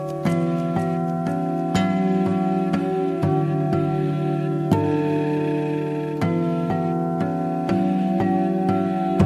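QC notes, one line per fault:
No faults found.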